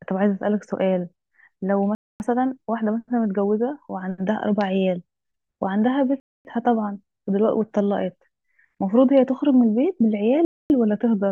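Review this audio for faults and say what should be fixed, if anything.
The speech stops dead three times, at 1.95–2.2 s, 6.2–6.45 s and 10.45–10.7 s. Each hole is 250 ms long, and they come around every 4 s, which is a classic gap between chunks. The audio was handled in 4-second blocks and silence got inserted at each join. It sounds like padding or a late start on each block, so nothing's missing, it's just broken up. To fix it, trim the padding and queue the next chunk before the current one ends so playback runs gapless.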